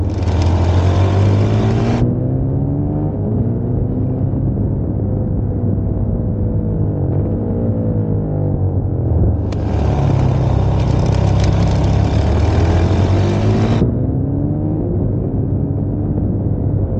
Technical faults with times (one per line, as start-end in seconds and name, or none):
0.00-17.00 mains hum